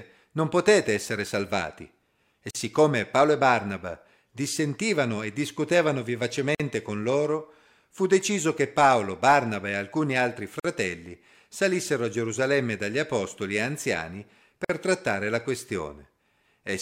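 At 2.51, 6.55, 10.60 and 14.65 s, the speech drops into brief silence, a gap at a join of encoded pieces. The gaps last about 42 to 49 ms and recur every 4 s. Separately encoded pieces were joined untrimmed, so encoder delay and end padding remain. Edges are smeared.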